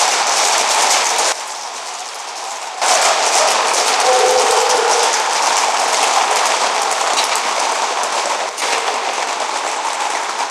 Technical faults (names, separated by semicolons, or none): sudden gain jump